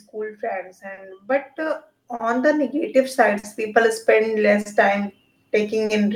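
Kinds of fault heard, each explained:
Clock drift between sender and receiver: The sending device's clock runs roughly 3 percent slow against the receiver's, so the jitter buffer keeps draining. The receiver keeps repeating short pieces, giving small timing hiccups throughout the clip.
Automatic gain rising: The gain control judged the input too quiet and raised its gain gradually from 0.47 s to 4.03 s, by about 12 dB in total. Speech and background noise swell together over those three and a half seconds.
Short stall from a late packet: At 0.93, 2.15, 3.39, 4.61 and 5.85 s a packet arrived late and the buffer emptied. The receiver held the last sound for 40 ms, each glitch spanning about 60 ms, then resumed where it stopped. Nothing is lost, but the sound drags briefly.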